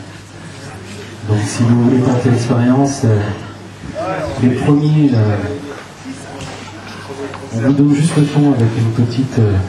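No audible technical faults.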